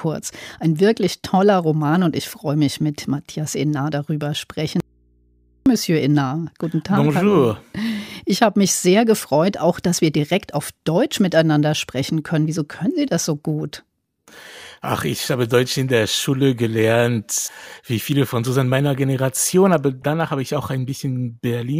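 From 4.80 to 5.66 s the speech suffers an audio dropout to a faint residue: for about 0.86 s the signal vanishes abruptly, leaving only mains hum roughly 40 dB down, likely from an open, still-live input. Unlike a pause or fade, the hum and hard edges give it away.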